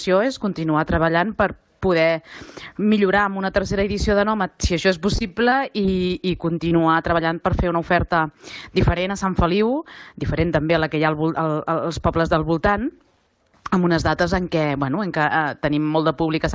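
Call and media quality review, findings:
Repeated packet loss (robotic sound), 5.16–6.12 s: choppy stretch. Six short gaps (longest 22 ms) are each patched by extending the previous sound, likely in jitter buffer concealment. Spectrogram: smeared, repeated columns. Waveform: copied cycles. Band stops at 8 kHz, consistent with G.722 wideband.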